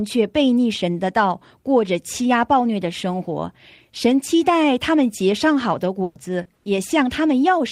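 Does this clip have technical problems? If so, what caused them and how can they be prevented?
Yes. At 6.03 to 6.17 s and again at 6.55 to 6.67 s there is a burst of packet loss. In each stretch the sound doesn't stop but the last sound is held and fades before the speech picks up again further along. About 120 ms and then 100 ms of real audio never arrived, and the receiver covered each hole by continuing the last sound and turning it down. A larger jitter buffer or packet-level redundancy such as forward error correction would prevent this.

At 6.43 to 6.47 s there is a short concealed packet loss, heard as a brief smear or wobble in the speech. Roughly 20 ms of audio missed the decoder's deadline, so the receiver extended the preceding sound and then blended back into the real signal. Keeping the network path stable, or sending a little redundant data, would prevent it.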